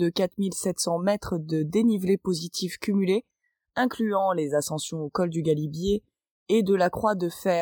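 Nothing in the audio stands out as a fault, so there's really nothing here to flag.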